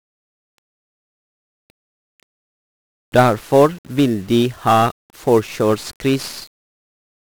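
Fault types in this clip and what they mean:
1-bit DFPWM compression: this speech runs through a codec that keeps just one bit per sample, and each bit only nudges an adaptive level up or down, so the waveform is always chasing itself. Across the whole clip that leaves a thick, broadband fuzz and crackle riding on everything, with the upper frequencies smothered in hiss. The damage is heavy, which fits a coarse stream of roughly 48 kbps.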